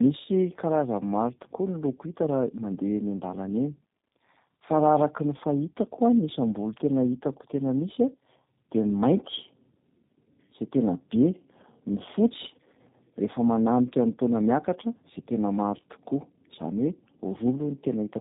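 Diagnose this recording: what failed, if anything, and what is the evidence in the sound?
The speech sounds rough, muffled and warbly throughout, with nothing above 3.8 kHz. This is tandem speech coding at the codec stage, fitting two G.729A passes with a G.711 link between them, each coder re-encoding the previous one's degraded output.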